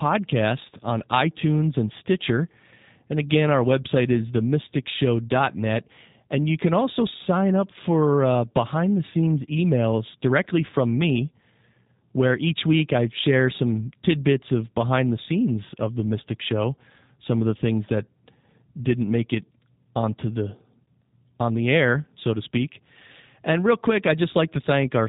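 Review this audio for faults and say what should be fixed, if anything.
The speech runs through G.729 codec coding for its full length, and it sounds like an 8 kbit/s VoIP link. Everything above about 3.8 kHz is gone, and the voice is rebuilt from a vocal tract model and sparse pulses, so it comes across plainly rough and synthetic. To prevent it, capture or route the call through a wideband codec such as G.722 or Opus instead of G.729.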